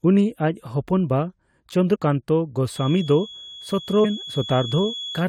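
Compressed frames skipped occur in this speech clip at 1.94 to 1.96 s and again at 4.04 to 4.06 s. At each point the audio lurches forward, losing roughly 150 ms of speech, which points to around seven whole codec frames that were missing or rejected as corrupt by the decoder. A feedback whistle enters at 2.66 s and runs to the end. It is a thin, steady tone at 3.4 kHz, sitting about 15 dB below the speech and swelling and fading slowly in level. The likely cause is a loudspeaker-to-microphone loop held just at the edge of feedback, so that one frequency keeps ringing without building up further.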